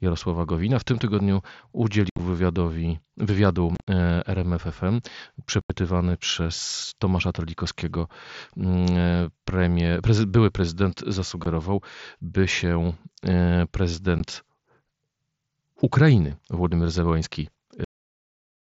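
Unconcealed Bluetooth headset packet loss hits at 2.10 to 2.19 s, just before "wywiadowi wywiadu e", at 3.75 to 3.88 s, right after "wywiadowi wywiadu", at 5.61 to 5.70 s, at 11.44 s after "premier prezy były prezydent", and at 14.19 s. Voice packets between headset and phone went missing and nothing filled them. The speech holes out abruptly. The first two are broken up, and the first three lose about 75 to 90 ms each. The last two are brief 15 ms gaps of two frames each, a spacing that fits 7.5 ms packets on the mSBC link.

A cut-off end follows at 17.84 s. The final buffers were never delivered, so the speech stops mid-sound and drops straight to digital silence with no natural decay, leaving dead air for the remaining fraction of a second. Because the waveform is truncated rather than faded, the stop is audible as a hard edge.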